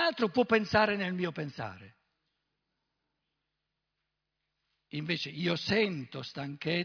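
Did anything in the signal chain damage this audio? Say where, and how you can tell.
No, nothing in the signal chain has audibly damaged this speech recording, and no stage from capture through to playback leaves a mark that can be heard.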